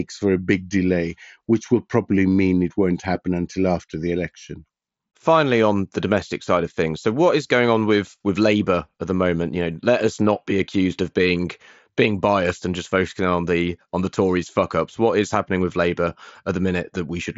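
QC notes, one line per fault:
No faults to log here; the speech comes over the Bluetooth mSBC headset link as wideband audio, which fits the band topping out at about 7.7 kHz.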